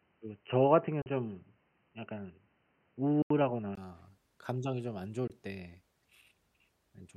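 From the start until 3.77 s the recording most likely came through a poorer input device, such as a headset's call profile, before switching to a better one. That device passes nothing above 3 kHz, so the speech sounds dull and boxy, with a faint noise floor about 50 dB below the signal. At 3.77 s a 20 ms silence marks the switch, after which the sound clears up and the level shifts by about 5 dB.

Audio packets likely failed to reach the Bluetooth headphones in time, causing three Bluetooth dropouts. At 1.02 s a 41 ms hole opens, which fits two lost packets. From 3.22 to 3.31 s a longer 81 ms gap fits four. At 5.28 s a brief 20 ms gap fits a single packet. Each hole cuts the sound to silence, and it resumes further along, as though it had kept playing.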